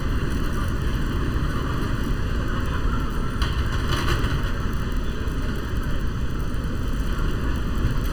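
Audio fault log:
Throughout: channel delay (comb filtering). One channel arrives under a millisecond late, and the mono sum cancels what both channels share at evenly spaced frequencies. The first notch sits near 700 Hz, with further notches roughly every 1.4 kHz above it. The sound is hollow and phasey.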